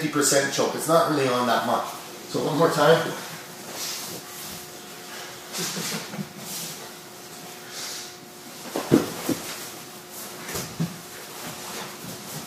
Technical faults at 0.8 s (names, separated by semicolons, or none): none